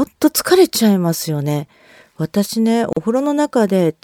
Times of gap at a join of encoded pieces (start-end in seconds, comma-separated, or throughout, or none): 2.93-2.97